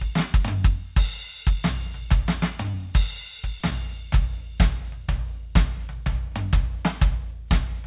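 At 2.71 to 2.74 s the music briefly smears. This is short concealed packet loss. About 10 ms of audio never reached the decoder in time. The receiver filled roughly 19 ms by extending the preceding sound, then blended back into the real signal. At 3.60 to 3.62 s the same thing recurs. There the patch is 10 ms long and sounds like a brief wobble. Both events sit on a band that stops at 4 kHz, which fits a G.711 call codec.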